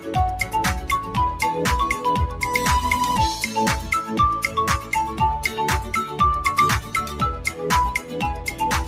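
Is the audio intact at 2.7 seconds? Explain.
No. At 2.7 seconds, as throughout the whole clip, a noise suppressor built for speech is still active on material it was never meant for. It mistakes sustained tones, ambience and decay tails for background noise and pulls them down, while sharp onsets slip through largely untouched. The result is a level that swings by roughly 5 dB, so held sound sinks and thins after each attack and the texture pumps and flutters.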